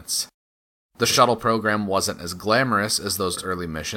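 At 1.05 to 1.18 s, just before "program wasn't as glamorous", frames play out of order. Two adjacent 46.4 ms blocks swap places, giving a garbled flutter. It recurs at 3.33 to 3.45 s, right after "program wasn't as glamorous". No time is lost.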